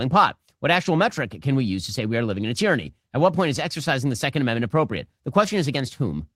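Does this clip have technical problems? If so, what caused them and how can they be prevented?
No, the speech signal holds steady throughout with no audible technical faults, so there is nothing here that needs a cause traced or a fix applied.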